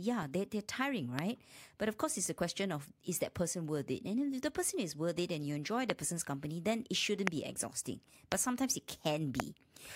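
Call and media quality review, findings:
Loud pop, five single events at 1.19, 5.90, 7.27, 8.32 and 9.40 s, each about 20 ms, peaking about 20 to 25 dB above the speech, which continues underneath. Likely an electrical transient, such as a connector, switch or static discharge, entering the chain.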